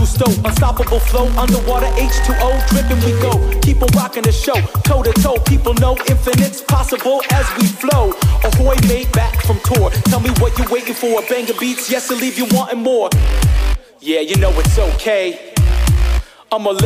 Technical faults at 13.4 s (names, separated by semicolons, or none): none